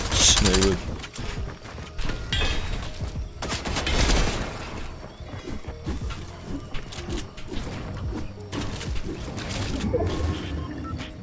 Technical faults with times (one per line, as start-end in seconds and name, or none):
none